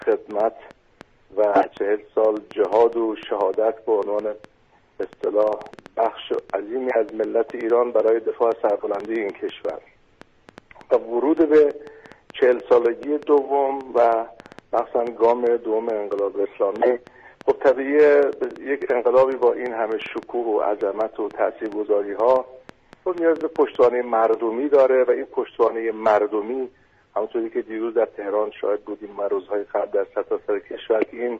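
A train of clicks runs from 0.02 s to 24.35 s: roughly a hundred near-identical pulses at an average of about 4.9 per second, spaced unevenly rather than in a steady beat. They peak at roughly the level of the sound itself, so they stay plainly audible as ticking and popping over it and through the pauses. The likely cause is an outside source repeatedly injecting pulses, such as interference from nearby equipment or a faulty connection or power supply.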